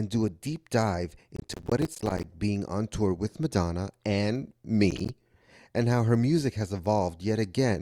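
From 1.36 to 2.24 s, between "do a deep dive" and "being on tour with", processor overload crackle sets in. Dozens of roughly 10 ms buffers drop to silence with hard edges, giving gritty tearing. A shorter burst of a few dropouts recurs at 4.91–5.09 s.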